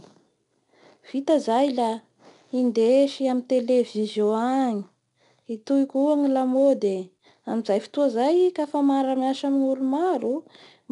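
From start to end, the speech carries 4-bit ADPCM compression. Each sample is coded as a coarse step from a prediction, so a gritty hiss rides on every loud syllable and sharp onsets smear. Nothing reaches above 10.6 kHz, which dulls the top.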